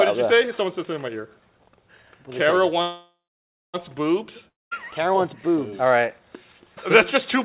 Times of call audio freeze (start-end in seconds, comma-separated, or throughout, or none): 2.82-3.76